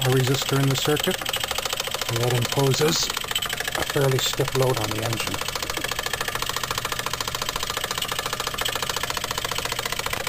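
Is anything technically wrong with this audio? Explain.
No, nothing technically wrong can be heard in this audio. It comes through without any audible fault from beginning to end.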